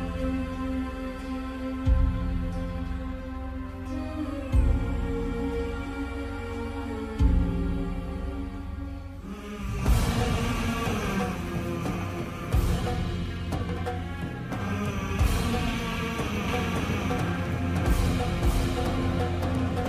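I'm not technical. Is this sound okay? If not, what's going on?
No. From about 16.48 s to the end, there's a doubled audio track: a second, equally loud copy of the sound trails about half a second behind, starting abruptly. It's likely the sound got recorded twice, once through a slower path.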